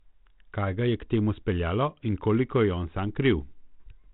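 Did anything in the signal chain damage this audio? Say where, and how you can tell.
No, the speech passes through a G.726 ADPCM stage at 32 kbit/s, which leaves only the light coding texture and the band limit near 4 kHz that this codec normally imposes, and no other stage in the chain has damaged the signal.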